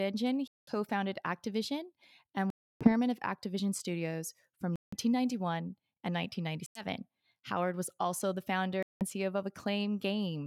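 Five sudden silences break the speech, at 0.48–0.71 s, 2.50–2.89 s, 4.76–4.93 s, 6.66–6.84 s and 8.83–9.04 s (right after "was also the"). Each time, speech resumes further on, as if it had kept playing. This is likely a Bluetooth dropout, where late audio packets were discarded.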